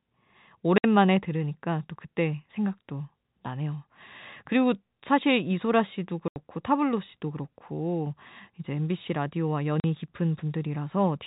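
At 0.78 s the speech drops out for 60 ms, then again at 6.28 s for 80 ms and at 9.80 s for 40 ms. That's packet loss filled with silence. Packets went missing and the receiver played dead air in their place, so each gap starts and ends with a hard edge. The lengths all step in 20 ms units, which fits 20 ms packets. Underneath, the G.711 telephone band stays narrow and clean.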